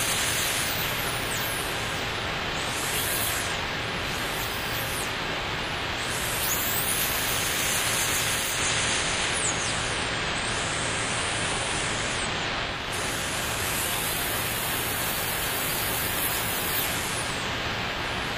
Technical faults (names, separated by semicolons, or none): digital radio blending to analogue